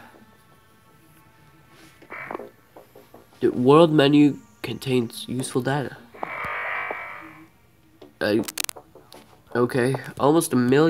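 A brief burst of scratching, rustling noise sits over the sound from 8.43 to 8.73 s, roughly 10 dB below it: cable scratch noise, likely from a worn connector being moved.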